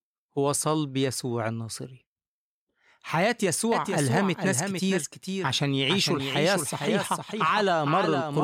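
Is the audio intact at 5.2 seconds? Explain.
No. At 5.2 seconds the speech carries a doubled audio track, running from 3.72 s to the end. A second full-band copy trails by about half a second at roughly 5 dB down, likely from a slower capture path or misaligned edit, and it begins abruptly, with no decay or room colour.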